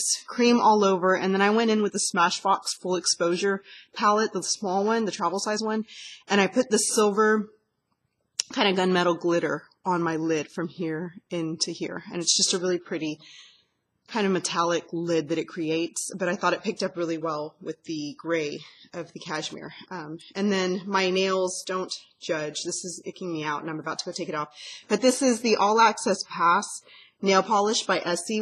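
No technical faults can be heard anywhere in this audio. Nothing in the sound points to a problem in how it was captured, processed or played back.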